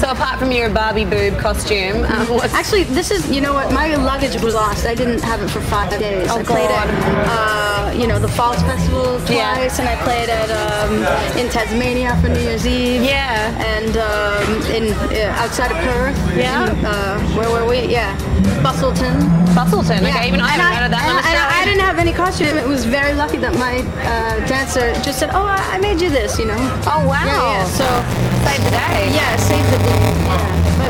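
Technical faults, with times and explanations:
4.37–4.55 s, 5.83–6.02 s and 22.43–22.60 s: frames out of order. In each stretch, two neighbouring blocks of about 80 ms, which fits runs of four frames, were decoded in swapped order. The stretch plays back-to-front in halves, heard as a brief garbled flutter. No time goes missing. A spectrogram shows sudden vertical breaks where contours jump and resume mismatched, and the waveform shows abrupt steps at each join.
27.66–30.9 s: buffer tearing. The writer and reader of the playback ring buffer have slipped, so about a tenth of every buffer repeats audio from around 20 ms earlier, with hard joins on both sides. This produces a continuous robotic buzz at 172 Hz, which fits a 256-sample buffer, and it is present only while sound is playing. A spectrogram shows regularly spaced vertical striations with a 172 Hz harmonic comb, and the waveform shows discontinuities repeating every 5.8 ms.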